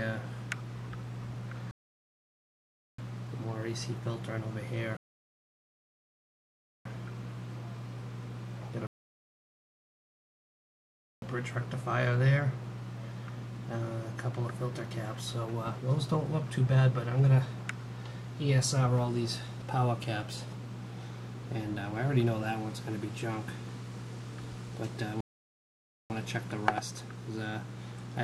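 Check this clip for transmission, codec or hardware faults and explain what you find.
Four rebuffering stalls occur, at 1.71–2.99 s, 4.97–6.85 s, 8.87–11.22 s and 25.21–26.10 s. Each time the player emptied its buffer and waited for more data. The sound drops to silence, then resumes exactly where it stopped. Nothing is lost. Each pause adds 0.9 to 2.4 s.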